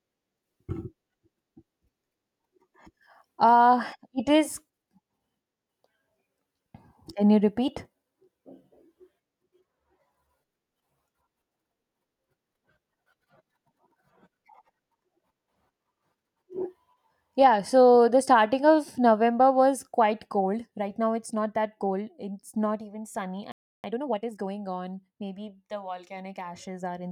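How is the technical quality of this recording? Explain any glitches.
The recording has two linked playback glitches near the end of the speech, both just after "not even sunny".

From 23.52 to 23.84 s there is a playback stall: the audio stops dead for about 320 ms, likely because the player ran short of data or its thread was held up. The waveform shows a flat gap and the spectrogram a blank vertical band.

From 23.84 to 24.48 s comes time-compressed catch-up: the player trims its backlog by splicing out short slices and cross-fading, so the speech runs at 1.5 times speed with unchanged pitch. The spectrogram shows harmonics at normal height but squeezed closer in time.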